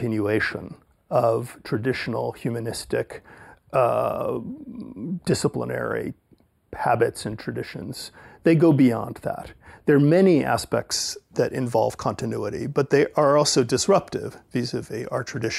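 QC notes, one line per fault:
0.00 to 10.91 s, channel delay (comb filtering). One channel lags by a tiny fraction of a millisecond, which fits a delay of a few samples. In the mono sum, shared content cancels at evenly spaced notches, the first around 7 kHz. The highs sound dull and phasey.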